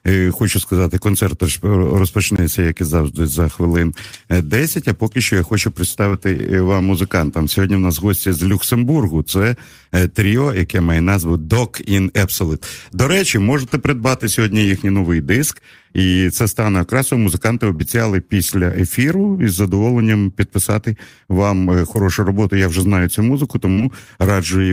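Speech recording with two kinds of fault. Blocks of digital silence occur at 2.36–2.38 s, just before "як і завжди за", and at 6.39 s. At each point the signal drops straight to silence and returns with no fade. The first gap, about 21 ms, is heard as a short hole. The second, about 5 ms, is closer to a tick. These lengths fit 1024-sample and 256-sample output buffers that were not filled in time. Short concealed packet loss appears at 6.10–6.13 s, 17.76–17.83 s (just before "після ефіру із задоволенням"), 21.93–21.97 s, and 23.73–23.79 s (just after "вже знаю цю музику"). Each time about 20 ms of audio, and 40 ms in the last case, failed to reach the decoder. The receiver extended the preceding sound, then blended back into the real signal, producing a brief smear or wobble. Around 17.8 s, about 12 ms of the signal was also dropped during recovery.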